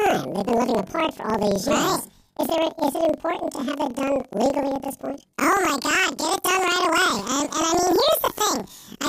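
From start to finish, the speech has planar audio read as interleaved. Each 42.67 ms block, which fits a 2048-sample block, stores all left samples and then all right, but playback takes them as alternating pairs, so every block plays twice at double speed. The voice sits an octave high with a 23.4 Hz flutter. Unlike a sample-rate mismatch, the pace stays normal, since the doubled halves fill the original time.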